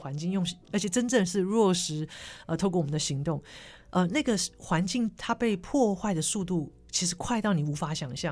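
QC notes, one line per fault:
No faults were heard anywhere in this speech clip. There is nothing here that needs a timestamp or a fault line.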